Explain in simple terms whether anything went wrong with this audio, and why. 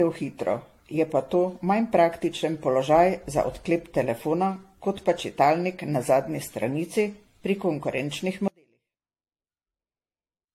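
Generation loss runs through the whole clip. The speech sounds swirly, smeared and hollow, consonant onsets are blurred, and the very top of the sound is cut off above 16.6 kHz. This most likely comes from the audio being compressed with the AAC codec and then decoded and compressed again, about seven times in a row. Each round throws away a little more detail in slightly different places, so the damage keeps adding up.

An audio dropout to a faint residue starts at 8.48 s and lasts to the end. The speech cuts out abruptly, not like a natural pause or a fade-out. What remains is only a very faint trace of the sound, far quieter than before. The likely cause is that the wanted signal was lost partway through while the rest of the recording chain kept running and picked up just that weak leftover.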